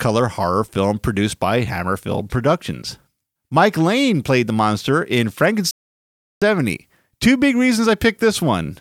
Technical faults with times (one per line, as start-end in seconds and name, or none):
5.71-6.42 digital broadcast dropout